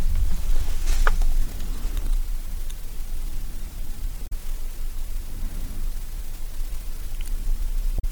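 Damaged data in a compressed stream breaks the audio twice, from 4.24 to 4.32 s and again from 7.96 to 8.04 s, each a burst of roughly 90 ms. At both points the encoded bytes are corrupt or missing, so the decoder misreads or discards the affected frames, loses its place in the stream and searches for the next valid frame header to recover.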